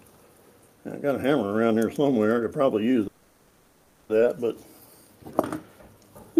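Around 3.07 s the audio stalls in a call audio freeze that runs to about 4.11 s. The last bit of sound is stretched out as a fading buzzy hiss for roughly a second and never drops to true silence. When things pick up again, the audio resumes right where it stopped, with nothing skipped. Everything after the stall simply runs about 1.02 s late. That pattern likely comes from packets getting held up in transit until the jitter buffer ran dry.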